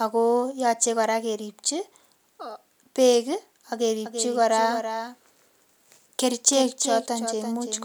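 From 4.05 s to the end, the speech has a doubled audio track. A second, quieter copy trails by roughly 300 ms, likely from an out-of-step capture path.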